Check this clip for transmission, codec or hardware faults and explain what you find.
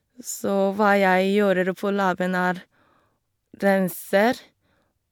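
No faults turn up anywhere in the recording. The speech carries on without any break or damage that a listener could point to.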